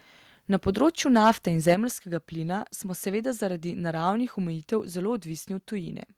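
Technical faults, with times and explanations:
1.15–1.31 s and 1.68–1.74 s, microphone overload: the loudest syllables turn harsh and crackly, likely because the input was driven about 4 dB and then about 3 dB past the converter's limit. A small share of peaks are flattened, showing as squared-off tops on the waveform and as broadband vertical smears in the spectrogram.
1.74 s, microphone volume stepped down: immediately after the second distorted peak, the speech and the background noise both fall by about 6 dB in a single step. The cause is likely call software reacting to the clipping by cutting the device's input gain. The waveform envelope halves abruptly, and the spectrogram dims evenly at all frequencies from that point on.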